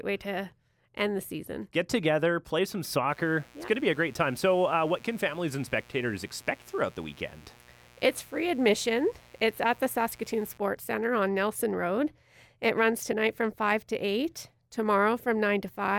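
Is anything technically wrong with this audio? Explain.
Yes. Mains buzz runs from 3.09 to 10.58 s: sharp switching spikes at twice the 60 Hz supply leak in, giving a steady, raspy buzz roughly 30 dB beneath the main sound.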